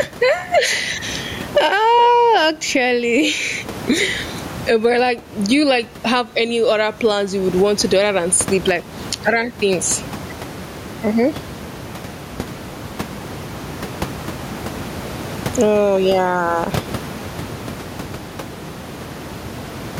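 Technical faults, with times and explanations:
Throughout, gain pumping: the room noise sits about 29 dB below the speech, with the level swinging by around 20 dB. The cause is likely input gain set far too high and a fast limiter or compressor clamping each loud sound. Unlike a noise gate, the background never cuts to silence, and the speech sounds squashed and flat in dynamics.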